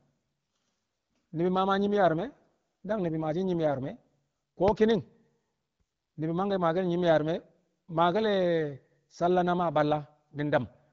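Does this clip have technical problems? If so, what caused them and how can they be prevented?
Yes. From 1.77 to 4.0 s, an AMR rate drop lowers the wideband codec from 12.65 to 8.85 kbit/s to protect a weak radio link, making the speech rougher and more synthetic with no gap. Stronger radio coverage at the handset prevents it.

Between 4.68 and 4.94 s, a loud pop appears as two sharp pops about 15 dB above the speech, which carries on underneath. It is likely a voltage transient from a plug, switch or static discharge. Secure connectors, good grounding and static control prevent it.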